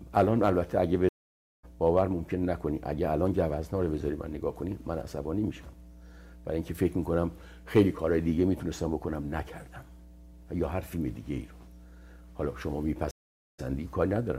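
A ground loop or nearby transformer is coupling the 60 Hz power line into the signal, laying a steady mains hum, roughly 20 dB below the signal, under the whole recording. At 1.09 s and again at 13.11 s, a stream reconnect occurs: the connection drops, the player falls silent for about 0.55 s and then 0.48 s, and a fresh decoder resumes further on, skipping roughly half a second the first time and only slightly the second.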